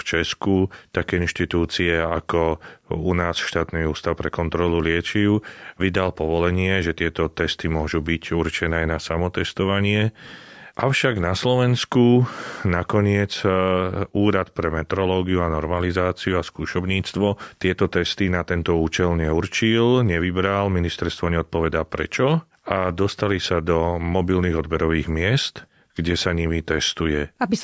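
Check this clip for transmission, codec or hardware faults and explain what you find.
No faults can be heard anywhere in this speech recording.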